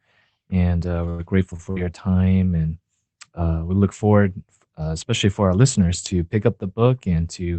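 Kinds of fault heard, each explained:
Short stall from a late packet: The speech briefly hangs on one sound, held with a faint buzz or dip, at 1.09 to 1.22 s and again at 1.56 to 1.62 s. A packet arrived late, the jitter buffer ran dry, and the receiver stretched the last sound, by 94 ms and then 24 ms, before resuming.
Jitter buffer speed-up: From 1.22 to 1.53 s the speech runs about 11 percent fast at unchanged pitch and sounds hurried. After the first stall had added delay, the receiver snipped out short pitch-period pieces, around 40 ms in all, to shrink the backlog.
Burst of packet loss: At 1.71 to 1.79 s a sound is held and fades out, and the speech then jumps ahead. About 60 ms of audio never arrived in time, and the receiver covered it with 52 ms of decaying continuation of the preceding sound.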